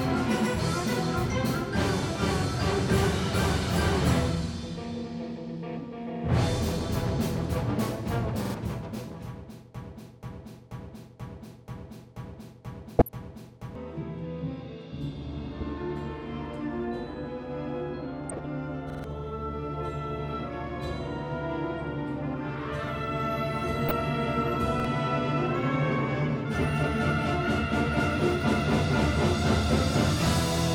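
At 8.45 s a repeated buffer produces a short stutter. The same piece of about 46 ms, which fits a 2048-sample buffer, plays twice more with a hard join at each repeat, and roughly 0.1 s of audio is lost. Because it repeats only two or three times and is over within a tenth of a second, it reads as a brief catch rather than a loop.

From 9.75 s to 13.75 s a broken-record loop takes over. A fragment of 0.48 s repeats exactly, back to back, eight times, and four seconds of the audio that should have played are gone. The length of the repeated piece and the duration of the fault set it apart from the buffer stutters. The likely cause is a stalled player, encoder or stream that kept sending its last fragment.

DAB burbling appears at 12.99 s, during the loop, and again at 15.59, 18.29 and 23.88 s, each lasting under a fifth of a second. Uncorrected bit errors at a low rate reach the MP2 data, and wrong samples put short blips of noise in single sub-bands. 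The result is short noisy blips laid over the sound. Nothing repeats here. The sound is smeared in texture rather than replayed.

At 18.90 s a repeated buffer plays the 46 ms piece three extra times, losing about 0.15 s. At 24.80 s a single extra play gives only a quick stutter, with about 50 ms lost.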